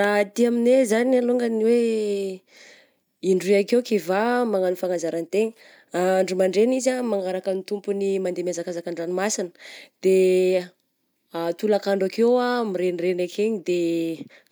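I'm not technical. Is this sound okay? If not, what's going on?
Yes, nothing stood out as a problem when listening to this speech recording.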